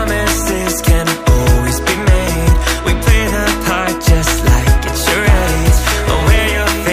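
A single sharp tick sounds at 3.78 s. It is a bit error spike. One sample jumps to about -13 dBFS and snaps straight back. A flipped bit in memory or on a digital link causes it. The click is broadband and unrelated to the surrounding audio.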